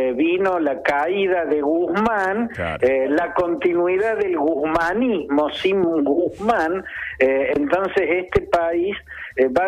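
A sudden voltage spike, likely from a switch, a connector or a driver glitch, entered the signal path twice and produced a loud pop each time. The first runs from 5.84 to 5.86 s and the second from 8.37 to 8.39 s. Each is a single sharp crack lasting a couple of hundredths of a second and peaking about 10 dB above the surrounding audio. The sound carries on underneath both pops.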